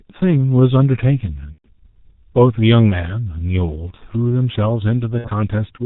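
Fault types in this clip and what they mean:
G.723.1 codec: throughout, the speech passes through an early internet-telephony codec at 6.3 kbit/s, which codes 30 ms frames and discards everything above 4 kHz. Its model of the voice adapts slowly, so the damage here is heavy: the speech is muffled and hoarse, and consonants smear into each other.
VoIP packet loss concealed by the speech codec: at 1.52 to 1.66 s about 120 ms of audio is missing, and at 5.18 to 5.29 s about 60 ms. In each gap the decoder rebuilds from the last pitch and filter it had, stretching the sound into a fading tone or noise, and in the longer gap it goes silent from the third lost frame. Because each frame builds on the previous one, the voice stays weak and distorted briefly after packets resume.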